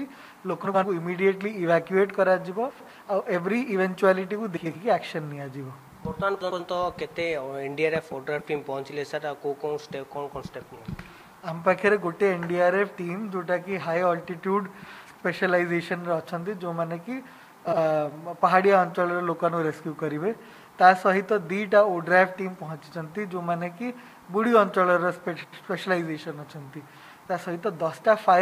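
Frames out of order at 0.65–0.85, 2.70–2.89, 4.56–4.76, 6.41–6.60, 10.75–10.85, 15.06–15.21, 17.67–17.78 and 25.43–25.63 s: in each stretch, two adjacent blocks of about 46 to 93 ms play swapped, with the later audio first. This produces a brief garbled flutter, and no time is lost.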